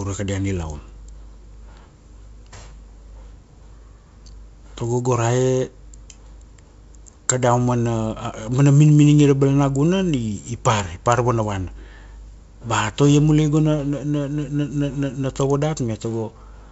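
Nothing stood out on listening to this speech, which comes through the G.722 wideband telephone path at 64 kbit/s.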